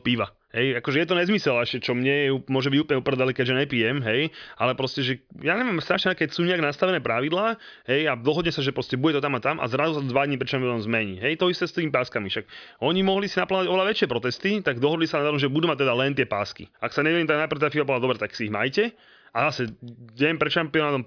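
Nothing in this speech recording stands out as a technical fault; it just runs along without any glitch worth flagging.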